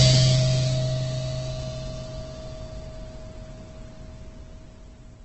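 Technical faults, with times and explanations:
throughout: Opus compression. The music sounds grainy and rough, its tones turned noisy rather than swirling, with nothing above 8.2 kHz. This likely comes from heavy Opus encoding in its CELT music mode, consistent with a very low rate near 12 kbps, filling starved bands with folded or noise-like content.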